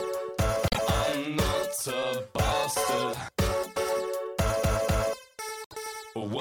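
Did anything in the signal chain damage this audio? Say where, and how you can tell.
Yes. Frames out of order, at the network/decoder stage: at 0.67–0.79 s and 5.64–5.75 s a brief garbled flutter. Two adjacent 26.1 ms frames were decoded swapped, so each stretch plays its halves exchanged without losing time.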